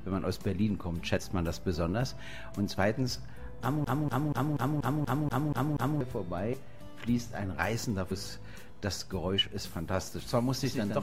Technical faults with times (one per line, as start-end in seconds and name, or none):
1.16-1.20 compressed frames skipped
3.84-6.01 CD stuck on one turn
6.52 compressed frames skipped
8.10 compressed frames skipped
9.38-9.41 compressed frames skipped
10.64-11.02 doubled audio track